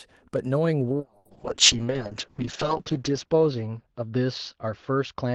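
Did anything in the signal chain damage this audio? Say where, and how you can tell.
Yes. The damage is at the codec stage, driven by the call's rate control: a call bitrate drop starting at 0.95 s and lasting to the end of the clip. The bandwidth estimate fell, and the encoder went from 32 kbps to 6 kbps, sitting at the floor for about 1.9 s. The audible bandwidth shrinks from 20 kHz to 8 kHz, so the speech turns muffled, and the coarser coding makes it rough and watery.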